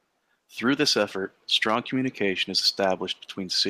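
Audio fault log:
No technical faults can be heard anywhere in the speech recording.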